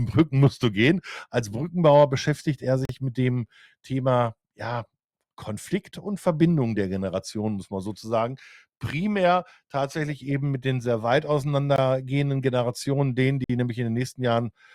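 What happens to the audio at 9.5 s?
Nothing goes wrong at 9.5 s; the audio plays through that moment intact, with no dropout, click, distortion or other audible fault.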